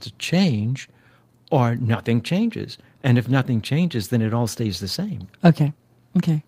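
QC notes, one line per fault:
Nothing to flag on this one; no faults turned up anywhere in the recording.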